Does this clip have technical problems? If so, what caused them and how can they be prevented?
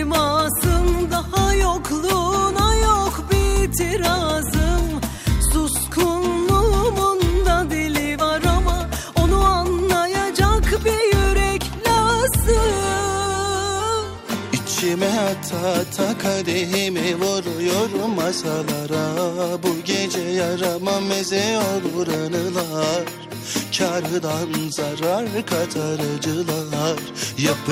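Yes. A repeated buffer occurs from 5.16 to 5.18 s. New audio arrived late, so the device replayed the last short block twice more, which fits a 10 ms buffer. This gives a brief buzzy click and drops about 20 ms of the sound. Larger playback buffers and a steady audio thread would prevent it.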